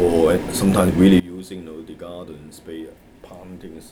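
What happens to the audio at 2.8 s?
One channel inverted is the likely cause of what happens at 2.8 s, within a stretch running from 1.20 s to the end of the clip. When the two stereo channels are summed to mono with one flipped in polarity, everything they share cancels. The centred content and the low end largely disappear, and the level drops by about 20 dB. What remains is only the difference between the channels, a faint residue.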